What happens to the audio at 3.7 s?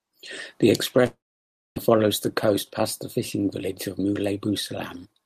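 From 3.61–5.22 s, after "coast past the fishing", a jitter buffer speed-up drops pitch periods, hurrying speech to 108% at unchanged pitch, unlike resampling.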